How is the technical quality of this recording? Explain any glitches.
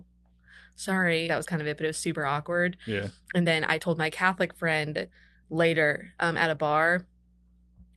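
The speech has two kinds of glitch: one skip ahead and two stretches of jitter buffer speed-up. It passes through a call codec whose spectrum stops at about 12 kHz, which fits Opus at around 32 kbps.

Between 1.29 and 1.46 s there is a skip ahead. Roughly a second of speech never plays. Audio was discarded in the receive path while later packets were already queued, so playback jumps straight to them. The two sides of the jump are joined almost without a gap, and the speech lurches forward mid-flow. On a waveform the envelope changes abruptly at the splice, and on a spectrogram the formant tracks break and restart elsewhere.

The jitter buffer speed-up comes in two stretches: from 1.86 to 2.16 s at about 109 percent speed, and from 2.86 to 6.57 s at about 113 percent. The buffer held more audio than its target, so the receiver repeatedly cut out pieces one or a few pitch periods long. That removes about 40 ms in the first stretch and about half a second in the second. 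The speech sounds hurried while the pitch stays unchanged. On a spectrogram the harmonics keep their spacing while syllables look compressed in time. On a waveform the pitch cycles are periodically shortened or skipped.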